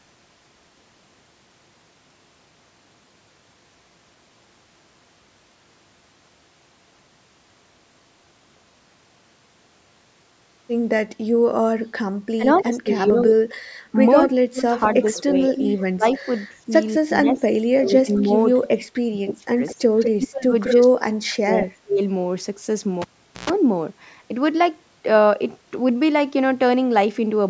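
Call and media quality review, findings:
Speech suppressed in double talk, 12.35 to 19.61 s. Level dips in pieces, deepest about 35 dB, roughly 3 s affected in total. Second episode 20.15 to 22.0 s, deepest about 40 dB, roughly 1.5 s affected. Likely cause: echo canceller ducking both directions when the two sides talk at once.

Echo leak at 12.54 to 12.61 s, about 25 dB below speech. Again at 14.18 to 16.25 s, about 5 dB below. Then 18.15 to 18.84 s, about 15 dB below, and 19.66 to 20.73 s, about 5 dB below. Delayed copy of the talker, 205 ms behind. Likely cause: far-end loudspeaker pickup not fully cancelled and sent back.

Cable pulled and plugged in, 23.02 to 23.50 s. Pop on disconnect, then near silence for 430 ms. A 120 ms burst of 60 Hz mains buzz follows while only the tip makes contact. A second pop as the signal returns. The band-limited call microphone chain, with nothing above 8 kHz, is working normally.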